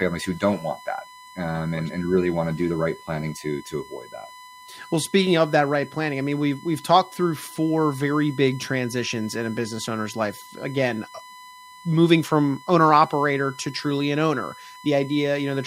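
USB whine runs throughout, a steady fixed-pitch tone at 1 kHz sitting roughly 20 dB below the speech. Current drawn by the USB bus in 1 ms frames leaks into the audio through shared power or ground, leaving this constant whine.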